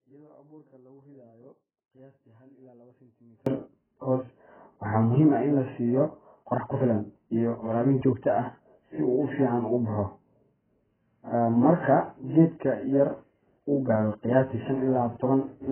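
From the very start until 3.46 s, the speech sits far below its normal level, roughly 30 dB down, with only a faint residue audible. It is likely an audio dropout to a faint residue. The loss is already under way when the clip begins and ends abruptly, unlike a gradual fade-in or a natural pause.

Throughout, the speech is dull and smeared, with nothing above 3.1 kHz and a fizzy, warbling texture on sibilants. This is likely heavy AAC compression, consistent with AAC-LC at a very low bitrate around 8 kbps. The artefacts come from coarse quantisation, which distinguishes it from simple low-pass filtering.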